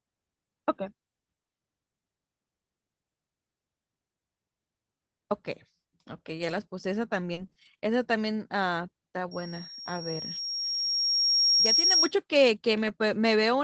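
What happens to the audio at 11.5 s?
A piercing, steady tone near 5.6 kHz is sounding over the speech at this point. It began at 9.31 s, swelled over about two seconds to sit a little louder than the speech, and lasts until 12.12 s. This is loudspeaker feedback squeal: the microphone is picking up the loudspeaker it feeds, and at 5.6 kHz the loop gain exceeds one, so that single frequency keeps reinforcing itself until the loop is broken.

Right beside it, at 11.45 s, there is a brief patch of roughness, a grainier, noisier instant lasting about 20 ms, with no dropout or silence. That is a lost packet rebuilt from error correction. One packet went missing, and the following packet carried a low-bitrate backup copy of it, which Opus's in-band forward error correction uses to fill the hole. The copy is coarser than the original, so the frame sounds rougher, but the audio runs on without a gap.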